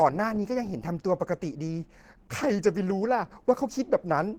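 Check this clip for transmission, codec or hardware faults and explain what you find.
One codec fault runs through the whole clip. Opus compression, throughout, is likely: a hybrid speech mode, which fits a bitrate near 16 kbps. Fine detail is approximated rather than kept, so the speech sounds plainly hoarse, grainy and muffled, though the band still reaches about 20.2 kHz.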